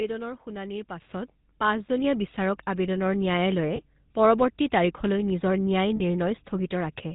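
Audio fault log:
Throughout: GSM full-rate codec. The speech has that buzzy, gravelly grain you get when the vocal tract is modelled and driven by a thinned-out pulse train that keeps only every third excitation sample. The damage is plainly audible, and nothing comes through above 4 kHz, so the top end sounds dull and closed in. All of that fits the old 13 kbps full-rate GSM codec. The roughness sits on the voice for the whole clip.
1.02 s: microphone volume stepped up. The level jumps by about 7 dB all at once, and the voice and background rise together rather than the talker simply getting louder. That points to the call software deciding the input was too quiet and bumping the device's capture gain in a single step instead of ramping it. Because the change is instantaneous, you hear a clear step in loudness and noise floor from that point on.
3.76–3.80 s and 5.96–6.01 s: lost GSM frames. 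Each dropout is a short metallic, ringing hold on the sound. The first lasts about 20 ms, which fits a single lost frame. The second runs about 40 ms, which fits two. In both cases the decoder is reusing the settings from the last good frame, so the sound freezes into a rough ring before normal speech resumes.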